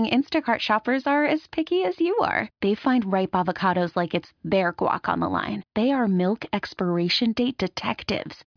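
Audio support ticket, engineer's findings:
No audible defects found in speech recording. Nothing to action.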